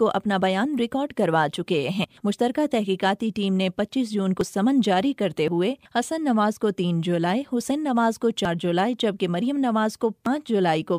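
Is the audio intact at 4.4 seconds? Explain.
No, at 4.41 s the sound jumps ahead, likely a dropped buffer (overrun), with roughly 50 ms lost and the two sides butted together.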